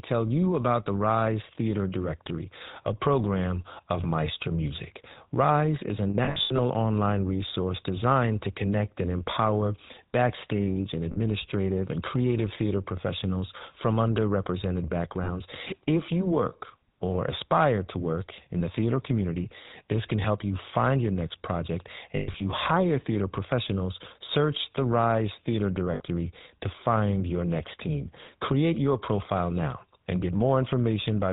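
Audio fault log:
Throughout: GSM full-rate codec. The speech is band-limited below 4 kHz and has a plainly audible buzzy, gravelly roughness. This is consistent with a 13 kbps full-rate coder that rebuilds the vocal tract from a sparse, regularly spaced pulse excitation.
6.1–6.6 s, 11.12 s, 15.24 s, 22.16–22.42 s, 25.94 s: lost GSM frames. At each point the decoder held the last good frame, so the sound freezes into a rough metallic ring. The first event comes between "is a" and "online resource designed to": about 280 ms is missing, in short runs spread over nearly half a second. The second, after "and empower backstage and", is a 40 ms gap. At 15.24 s another 40 ms is missing. At 22.16 s about 160 ms is lost over a quarter second, with the longest run near a tenth of a second. The last, 60 ms, comes just before "to find your next".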